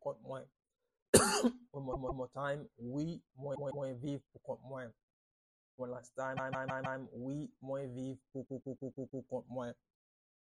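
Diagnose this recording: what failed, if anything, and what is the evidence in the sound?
The failure is at the codec or storage stage: repeated frames. A block of compressed audio about 157 ms long, which fits six frames of roughly 26 ms, was written or sent more than once, so the decoder plays it again. The sound stutters at 1.92–2.24 s and 3.54–3.85 s (two extra plays each), 6.36–6.99 s (four) and 8.45–9.24 s (five). Each repeat lengthens the audio, by about 2 s in total.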